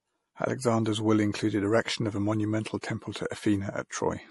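MP3 compression runs through the whole speech clip, and its artefacts are plainly audible. Above 11.4 kHz there is no content at all, which fits a low encoder bitrate of about 48 kbps. At that rate the encoder cannot fund every frequency line, so weaker ones are dropped and come and go between frames. That gives the sound its watery, swirling texture, and the cause is likely a lossy MP3 encode.

Pre-echo sits at 2.81 to 2.83 s, a smear about 24 ms long just ahead of a sharp onset. The transform block containing that attack spread its quantisation noise across its full length. The noise level suited to the loud onset therefore also covers the quiet stretch before it. The result is a brief hiss leading into the attack, which loses its crispness and sounds softened.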